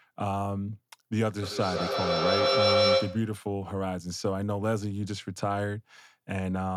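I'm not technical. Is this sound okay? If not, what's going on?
No. From 1.42 to 3.42 s there is a feedback howl: two devices in the same room are likely on one call, so sound loops from loudspeaker to microphone, growing louder each pass into a tone near 500 Hz.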